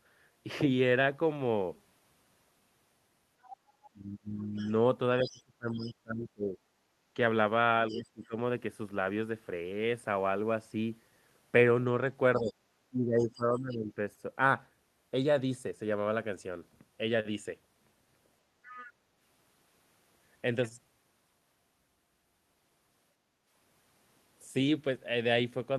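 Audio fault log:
3.42–8.27 s, 12.36–13.42 s and 18.66–18.90 s, other side's voice leaking through: a second, fainter voice sits under the talker, roughly 20 dB down in the first and third stretches and nearer 25 dB down in the second. It's most likely loudspeaker playback the echo canceller didn't fully strip from the mic.
3.91–8.35 s and 12.37–13.91 s, speech suppressed in double talk: while both sides overlap, the talker's level keeps ducking, by as much as about 25 dB across roughly two seconds in the first stretch and about 15 dB over around a second in the second. That's likely the canceller clamping down on everything because it can't separate near talker from echo.
6.85–7.08 s, 18.48–18.64 s and 23.15–23.46 s, background gated by the echo canceller: the room tone briefly sinks, by about 13 dB, 9 dB and 7 dB respectively, each time for a fraction of a second, then comes back. The canceller is pulling the mic down hard while the far end plays and releasing it afterwards.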